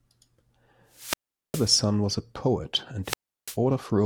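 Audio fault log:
throughout: sample clock jitter. A fine hiss and roughness rides on the speech, swelling on loud and bright sounds and disappearing in the pauses. The converter's clock wobbles by something under a microsecond, so each sample lands slightly off time, and steep waveform edges turn that timing error into noise roughly 40 dB below the signal.
0.91–1.79 s and 3.03–3.57 s: wireless microphone squelch dropout. Each time, static rises, the speech falls into a hole of near silence, and then it returns. The radio link from an analogue FM microphone fades until the receiver's squelch shuts the output, muting it for about 0.41 s in the first event and 0.34 s in the second.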